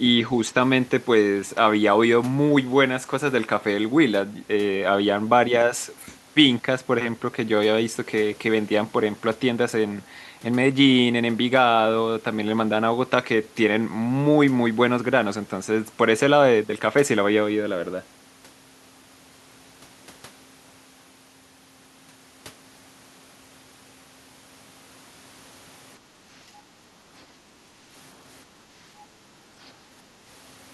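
A speech recording whose room background is gated by the echo canceller three times, at 26.0 to 26.27 s, 26.63 to 27.08 s and 27.37 to 27.64 s. Each time the ambience dips by about 6 dB for a few hundred milliseconds, as the canceller pulls the microphone down while the far end plays, then recovers. At 29.63 to 29.69 s a brief, very faint scrap of another voice appears, far below the main speech, most likely the other side's voice leaking through from the loudspeaker where the echo canceller left a residue.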